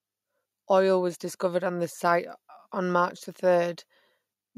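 A speech recording with nothing technically wrong to hear in it.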